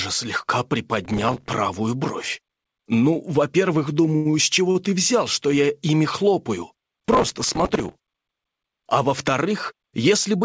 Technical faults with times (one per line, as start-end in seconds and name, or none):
1.05-1.52 processor overload crackle
4.16-4.35 short stall from a late packet
4.71-4.77 short stall from a late packet
7.07-8.39 processor overload crackle